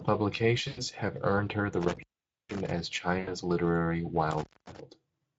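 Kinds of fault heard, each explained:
Speex codec: The speech is encoded throughout with Speex, a CELP codec, at a setting whose sound fits a bitrate of roughly 17 kbps. That leaves too few bits to describe the excitation signal faithfully. The damage is plainly audible across all of the speech: the voice comes out noisy and hoarse.
VoIP packet loss concealed by the speech codec: Packets went missing twice, and the Speex decoder filled each gap by repeating its last pitch and filter settings while lowering the gain frame by frame. From 0.67 to 0.80 s, just before "have earned her the", about 100 ms of audio was lost, which fits five 20 ms frames. From 3.19 to 3.34 s, about 80 ms was lost. Each gap is stretched into a fading, extrapolated sound, and the voice stays weak briefly afterwards.
Intermittent contact: A loose connection in the signal path opened twice, cutting the audio. The first break falls between 1.81 and 2.71 s, after "have earned her the", with the line open for about 470 ms. 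The second falls between 4.31 and 4.80 s, open for about 240 ms. Each break has a crackle at its edges where the contact makes and breaks, and faint hiss remains while the line is open.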